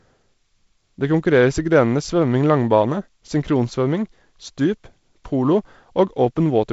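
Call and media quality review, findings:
No findings for the call and media quality review.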